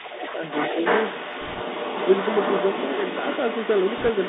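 The speech was carried over a Bluetooth CVSD headset codec for the whole clip. The one-bit delta coding, which fits a 64 kbps CVSD link, follows the waveform with an adapting step. The band runs only from about 200 Hz to 3.7 kHz, s sounds turn scratchy, and a granular hiss sits underneath.

Also running from start to finish is a second voice from the other side leaking through, most likely because the echo canceller left part of the far end's loudspeaker playback in the microphone signal. It stays only a little quieter than the main speech throughout.

From 1.41 to 1.61 s, bit errors on the Bluetooth voice link flip bits at an error rate of a couple of percent. Each CVSD bit carries only a small step and the damage fades quickly, so instead of clicks the speech takes on a rushing crackle.

The same bit errors return from 3.98 to 4.10 s. The error rate here is somewhat higher, a few percent, so the rushing, crackly noise laid over the speech is denser and rougher than in the earlier burst.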